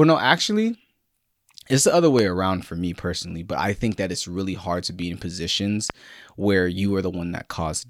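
A loud pop appears twice, likely from a sudden voltage pulse such as a plug, switch or static discharge: at 2.19 to 2.21 s, after "it's the other", and at 5.90 to 5.92 s, after "to be in positions". Each is a single sharp pop roughly 15 dB above the speech, which carries on underneath.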